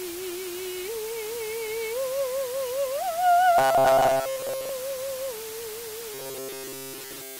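The music has been reduced to low bit depth with dither, only 5 bits, with dither added before rounding. This turns the quantisation error into a steady, even hiss that sits roughly 10 dB below the music for the whole clip, with no distortion.

From 3.58 to 4.70 s and again from 6.14 to 7.40 s, audio arriving too seldom is likely being covered by repeating short buffers of about 7.5 ms. This produces robotic sound from repeated short buffers, a rigid metallic buzz at 133 Hz. Most of the first stretch is repeated material, and nearly all of the second.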